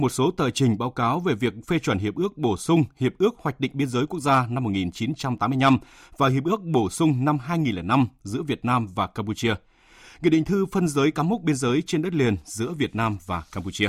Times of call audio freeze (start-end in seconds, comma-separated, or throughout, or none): none